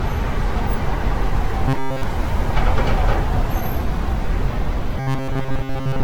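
From the start, the whole clip carries generation loss. The sound is swirly and hollow, and sharp onsets smear. The likely cause is repeated lossy coding, with the audio passed through a Vorbis encoder several times over. The damage matches a rate near 65 kbit/s, but it is worse than one pass at that rate would leave. Each pass adds fresh noise and spectral holes on its own grid.

From 1.68 to 2.03 s, the sound turns into a rigid metallic buzz. This is robotic sound from repeated short buffers. The buzz sits at 134 Hz. That fits a fragment of about 7.5 ms being looped, likely because new audio arrived too late. Most of the real audio in that span is skipped. The same buzz returns at 5.00 s and lasts to the end.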